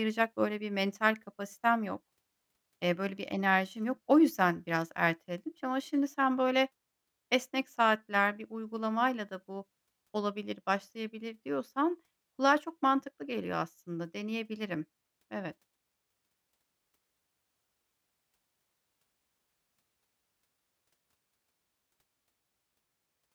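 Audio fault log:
No faults can be heard anywhere in this speech clip. There is nothing to mark at any point.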